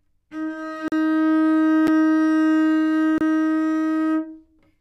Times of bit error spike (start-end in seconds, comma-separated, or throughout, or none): 0.77, 1.54